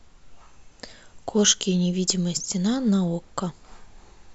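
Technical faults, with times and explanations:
2.37 s, dropped samples: a single sharp click cuts through the speech, a thin vertical line across the spectrum. The likely cause is about one missing sample, so the waveform jumps straight to a later value, far too brief to remove any sound.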